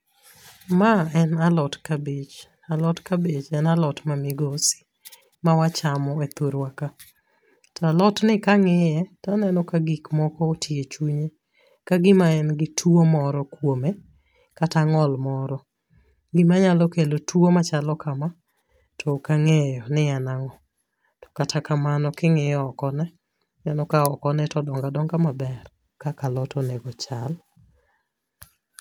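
There are no technical faults to describe in time order anywhere in this speech recording.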